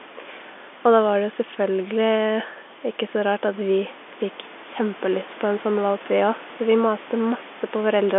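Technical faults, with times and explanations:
No technical faults are heard at any point in the clip.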